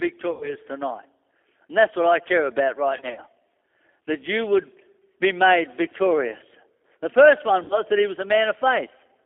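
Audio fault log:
throughout G.729 codec: The speech has gone through a low-rate CELP coder, which fits an 8 kbit/s G.729A stream. Each 10 ms frame is rebuilt from a vocal tract filter, a pitch predictor and a few fixed pulses rather than the true waveform, inside a 300 Hz to 3.4 kHz telephone band. This gives the voice a plainly audible rough, slightly synthetic edge, with thin lows and no air above 3.4 kHz.
0.31–0.55 s, 2.97–3.20 s, 7.64–7.81 s VoIP packet loss concealed by the speech codec: Audio went missing in transit and the decoder filled each gap by repeating its last pitch and filter with falling gain. About 100 ms is lost in the first event, which fits five 20 ms packets. The second loses 100 ms scattered over 200 ms, with no gap longer than 40 ms. The third loses 60 ms. Each gap becomes a stretched sound, a buzzy tone or coloured noise, that fades, and the voice stays weakened briefly after audio returns.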